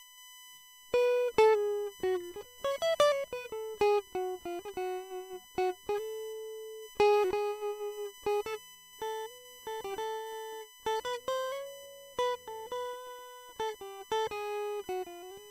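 USB whine runs from start to finish beneath the music, a steady tone with its fundamental at 1 kHz and its strongest component at the third harmonic, 3 kHz, sitting roughly 20 dB below the music. The USB bus pulls current in bursts every 1 ms, and that ripple leaks into the audio through shared power or ground, leaving a fixed-pitch whistle that never follows the music.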